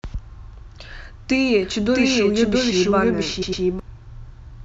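At 0.41 s a short stutter of repeated frames appears: a 52.2 ms stretch plays once more, which fits two compressed frames being written or sent twice. The decoder simply replays that slice, so the sound jumps back on itself, and the clip grows by 52.2 ms.

From 1.63 s to 3.80 s the clip carries a doubled audio track. A second full-band copy runs roughly 0.7 s behind the original at about the same level, most likely from the same signal being captured again through a slower path. With no decay or room colour, it reads as a flat, overlapping duplicate rather than an echo, and it cuts in and out abruptly at both ends.

Inside that section, at 3.41 to 3.62 s, a second case of repeated frames is longer. A 104.5 ms block, consistent with four frames, is played two extra times. This gives a triple stutter and adds 209 ms to the running time.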